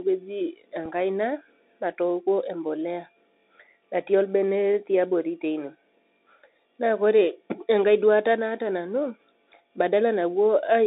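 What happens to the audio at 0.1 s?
At 0.1 s the speech is already running through a Bluetooth CVSD headset codec, as it does throughout. The one-bit delta coder's step size can't keep pace and the band is confined to 250 Hz to 3.7 kHz, so the sound is muffled, s sounds scratchy, with granular hiss beneath.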